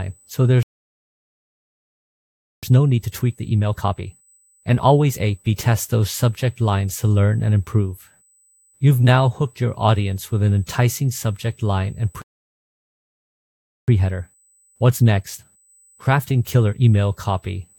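At 0.63 s the speech just stops dead and stays silent for two seconds, until 2.63 s. That's a playback stall: the player most likely ran dry of buffered data, or its thread got held up, so nothing reached the output until it recovered. The same thing happens again at 12.22 s, with a gap of about 1.66 s before the sound comes back at 13.88 s.

After each stall you get time-compressed catch-up, from 2.63 to 5.63 s and again from 13.88 to 16.88 s. The player is working through the backlog it built up by snipping out tiny slices and cross-fading across the joins, so the talk runs at 1.25 times normal speed for three seconds. Pitch stays where it should be, which is why it sounds hurried rather than chipmunky.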